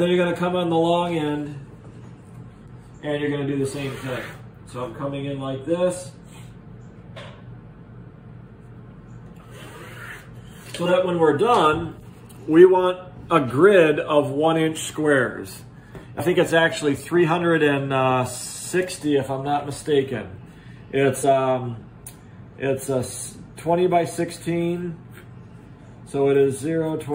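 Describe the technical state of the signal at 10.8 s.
At 10.85 s the signal shows compressed frames skipped, lasting until about 10.88 s. Some compressed audio frames never reached the output. Either they were missing from the stream or the decoder rejected them as corrupt. The playback therefore jumps forward, losing around 20 ms of sound. The seam is a point where the sound abruptly moves ahead.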